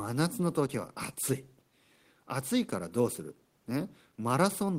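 The speech comes through without any technical fault, with only a faint bed of room noise sitting about 44 dB below the voice, which belongs to the recording space rather than to the signal chain.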